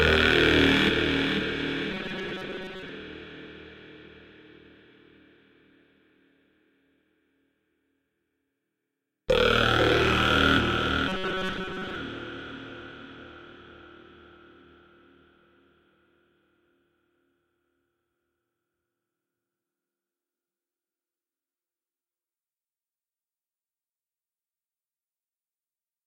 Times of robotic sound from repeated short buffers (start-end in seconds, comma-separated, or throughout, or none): 1.91-2.90, 11.08-11.95